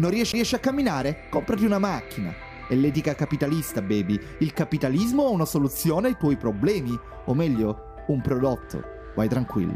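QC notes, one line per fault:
0.32 s, CD skip: a short tick where the player drops out for a very brief mute of around 15 ms and then resumes from a different point. A knock or a flaw on the disc threw the laser onto another turn of the spiral, so playback lost its place. The mute covers the moment of re-tracking, and because the sound picks up at a new spot instead of continuing, the flow breaks abruptly at the join.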